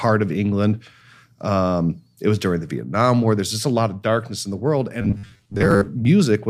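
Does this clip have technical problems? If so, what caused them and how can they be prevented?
Yes. From about 5.02 to 5.89 s the speech collapses into a robotic sound from repeated short buffers, a stiff metallic buzz near 100 Hz that only loosely tracks the talking. That pitch points to a roughly 10 ms chunk being replayed over and over, with about half the real audio skipped, likely because new audio wasn't arriving fast enough. To prevent it, give the playback or capture path a bigger buffer and keep the CPU load and network jitter in check.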